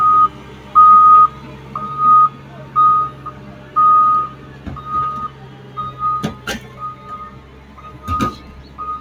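Throughout the sound, sustained parts and tails keep sinking while attacks punch through, so the level pumps and flutters by something like 15 dB and the ambience thins out. A noise suppressor built for speech was applied to these sounds, treating steady tones and decays as noise to cut.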